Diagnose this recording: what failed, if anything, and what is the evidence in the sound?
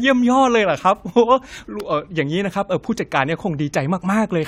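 Nothing here points to a failure at any stage, with the speech running its course and no audible dropouts, distortion or glitches along the way.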